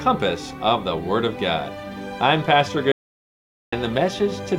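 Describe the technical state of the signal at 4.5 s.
At 4.5 s the signal is intact, with no audible technical fault at that point.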